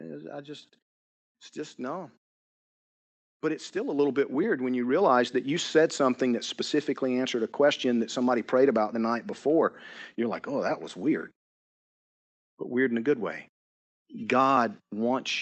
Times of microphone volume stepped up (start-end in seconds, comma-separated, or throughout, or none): 3.99, 5.01